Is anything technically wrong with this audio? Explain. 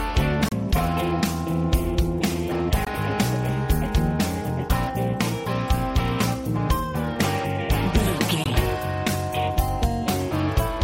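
Yes. Damaged data in a compressed stream causes brief garbled blips at 0.49–0.53, 2.84–2.88 and 8.43–8.47 s. Corrupted frames there make the decoder lose sync.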